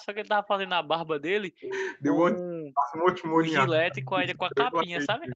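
Speech dips sharply at 1.59–1.73 s, 2.36–2.46 s, 2.73–2.94 s and from 3.65 s to the end, by up to about 35 dB. This is likely speech suppressed in double talk, where an echo canceller mistakes the talker for echo and turns it down.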